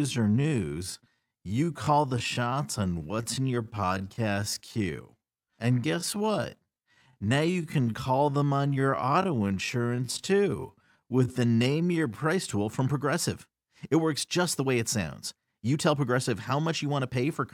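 From the start to 12.26 s the speech runs at about 0.61 times normal pace with its pitch unchanged, a time-stretched section, likely from software padding it by repeating short slices. It drags, snapping back to normal speed at "tool from".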